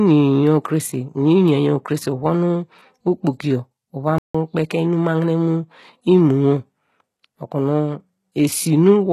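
Throughout the recording the speech carries the marks of HE-AAC compression, likely at a very low bitrate of around 16 kbps. The damage is plainly audible: sibilants sound gritty and lispy, and the upper range has a metallic sheen because it has been rebuilt from copied lower bands rather than coded directly. On a spectrogram the treble shows blocky, repeated-looking texture that ends in a hard ceiling.

At 4.18 s, just after "uvon okpoki yor uva", a playback stall cuts the sound off mid-flow until 4.35 s, a gap of about 0.16 s. The player most likely ran short of data or was briefly blocked, so output dropped to silence before resuming. It is heard as an abrupt hiccup in the speech. The waveform shows a flat line across that stretch, and the spectrogram shows a clean vertical blank band through all frequencies.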